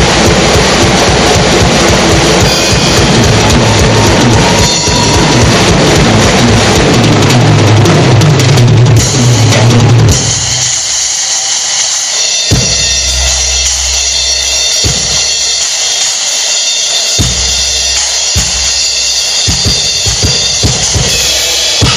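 Hard clipping runs through the whole clip: the signal is driven about 12 dB past what the stage can pass, so around a tenth of the samples get their peaks sliced flat. Those squared-off tops add a harsh, fuzzy edge to every loud moment.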